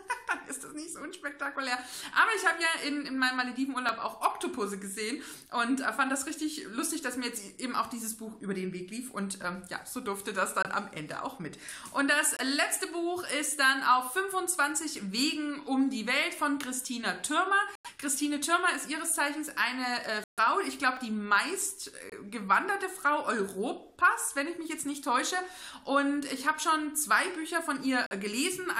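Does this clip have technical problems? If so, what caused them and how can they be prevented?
Yes. There are two blocks of digital silence, at 3.89 s and 20.97 s. Each is a tiny run of zeroed samples, 1.45 ms and 0.5 ms long. The first fits a 64-sample block. Each cuts in and out with no fade, so it sounds like a tick. To prevent it, use larger audio buffers so the output is always filled on time.

There are also corrupt frames that were muted. They fall at 10.63 to 10.67 s, 12.37 to 12.40 s, 17.75 to 17.88 s, 20.24 to 20.39 s, 22.10 to 22.13 s and 28.06 to 28.12 s. Damaged compressed frames were rejected by the decoder and replaced with silence. This leaves abrupt holes, but the timing is kept. To prevent it, use error-protected transport or storage so the frames arrive intact.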